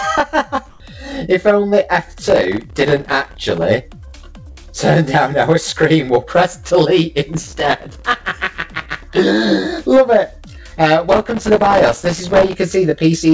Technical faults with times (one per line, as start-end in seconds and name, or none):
0.70-0.80 comfort noise in place of the background
2.25-3.65 processor overload crackle
4.08-4.17 burst of packet loss
4.52-4.71 short concealed packet loss
7.33-9.03 processor overload crackle
11.09-12.55 processor overload crackle